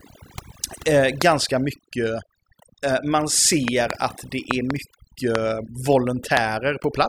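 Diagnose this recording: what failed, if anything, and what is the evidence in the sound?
The noise reduction in the processing chain was set too strong for this speech recording, so the damage runs through the whole clip. The suppressor pulls individual frequency bands far down or shuts them off whenever they sit near its noise estimate, and it cannot tell quiet parts of the voice from noise in those bands. The background is pushed down and breaks up into twinkling, warbling specks, and the low-level parts of the speech are removed along with it. This is overdone noise removal.

The second fault is a series of loud pops, most likely from the analogue wiring side: a plug, a switch or static putting a sudden voltage step or pulse into the signal. Single pops land at 1.22–1.24 s, 5.35–5.37 s and 6.37–6.39 s, and pairs of pops occur between 3.68 and 3.93 s and between 4.51 and 4.73 s. Each pop peaks about 20 dB above the speech, and the speech continues underneath.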